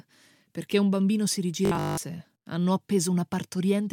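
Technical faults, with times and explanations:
1.65–1.97 s, robotic sound from repeated short buffers: Just after "perché un bambino si", the speech becomes a rigid, metallic buzz pitched at 50 Hz that still loosely traces the syllables. The likely cause is audio arriving too seldom, so playback fills each gap by looping the last 20 ms fragment while the real audio is skipped. A 20 ms loop repeats 50 times per second, which sets the buzz pitch, and repeats make up roughly two-thirds or more of this stretch.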